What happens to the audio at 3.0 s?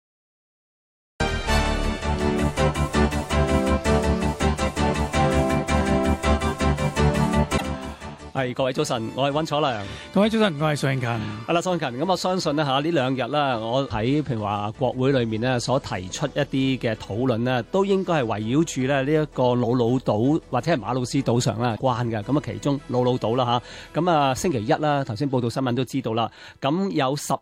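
Nothing goes wrong at 3.0 s; the audio carries on intact through that moment.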